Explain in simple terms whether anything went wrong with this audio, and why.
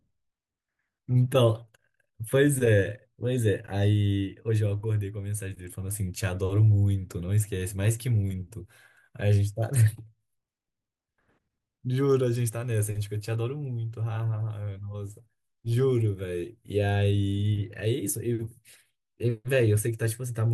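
Nothing went wrong here.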